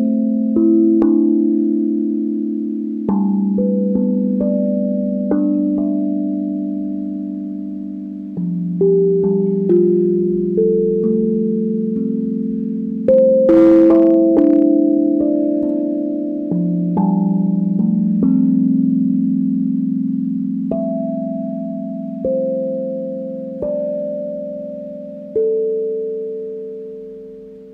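Hard clipping first appears at 1.02 s, driven about 4 dB past the ceiling, then as flattened peaks at 3.09 s and from 9.71 to 9.77 s, both right at the limit. From 13.09 to 14.62 s it runs about 3 dB over. The peaks exceed what the stage can pass and are sliced flat, producing a brief crackle and then crackle on the peaks through the longer stretch. The waveform shows squared-off tops, and the spectrogram shows vertical bands of high-frequency harmonics.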